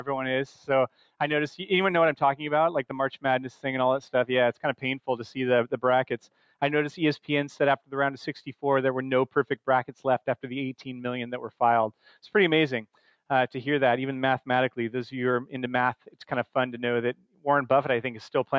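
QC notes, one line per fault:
0.88–1.09 s, 6.24–6.53 s and 17.17–17.45 s, sound cut by the noise suppressor: each time the level dips by about 11 to 12 dB for roughly a fifth of a second. The suppressor misread the sound as noise and pulled it down. Expected band-limiting from the call microphone chain, with nothing above 8 kHz, isn't a fault.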